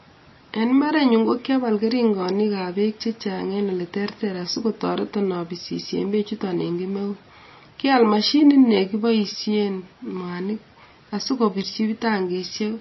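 From start to finish the speech carries MP3 compression damage that is plainly audible: a watery, swirling texture, metallic chirps on s sounds, and consonant attacks that smear. Nothing survives above 5.8 kHz, which fits a very low bitrate around 24 kbps, the likely cause. The encoder ran short of bits, so it cut the treble and zeroed weak frequency lines frame by frame. A spectrogram shows a flat ceiling at 5.8 kHz and flickering holes below it.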